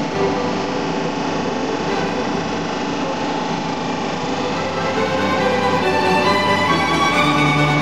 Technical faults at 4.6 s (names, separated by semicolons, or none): none